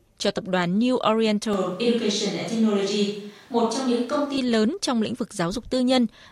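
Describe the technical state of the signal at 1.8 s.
At 1.8 s you're inside a stretch from about 1.53 s, right before "lớn trong lĩnh", to 4.38 s where the speech turns roomy and hollow and the bass thins out. The likely cause is a switch to a distant microphone: the close mic's feed dropped out and a farther pickup took over. The level stays about the same, with room noise sitting roughly 35 dB below the speech. It switches back abruptly at 4.38 s.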